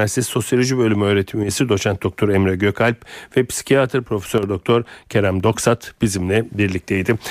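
At 1.43 to 1.49 s, just before "doçent doktor", the speech suddenly drops by about 6 dB for roughly 50 ms, then snaps back. The same dip happens again at 4.38 to 4.43 s, right after "ve psikiyatr". Both sound like one channel drops out, likely one side of the stereo feed cutting briefly. When the two sides are folded to mono, the shared part of the signal loses half its level.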